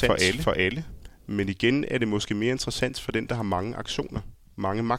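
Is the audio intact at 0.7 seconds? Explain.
No, at 0.7 s there's a doubled audio track: a second, equally loud copy of the speech runs roughly 400 ms behind, likely a slower capture path. It's already going at the start and cuts out at 1.46 s, just before "igen er det måske".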